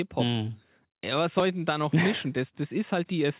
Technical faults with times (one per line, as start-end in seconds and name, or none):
1.40-1.42 skip ahead